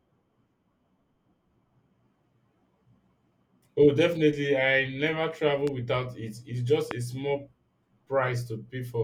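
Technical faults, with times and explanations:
5.67–5.70 s and 6.91–6.93 s, loud pop: Two sharp, single pops sit on top of the speech, each lasting about 20 ms. The first, just before "without it", peaks about 10 dB above the speech. The second, just before "a small", peaks about 15 dB above it. The speech continues beneath both. Each is likely a brief voltage spike, such as a switch or static discharge, entering the signal path. The circuits after it shape the spike into a short, hard burst.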